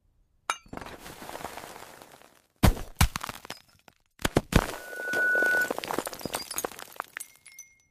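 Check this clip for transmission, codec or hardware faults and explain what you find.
One hardware fault is present. From 4.72 to 5.76 s, a loudspeaker feedback squeal: the microphone re-amplifies its own loudspeaker at 1.5 kHz, so that tone swells over roughly half a second to about 5 dB above the surrounding audio.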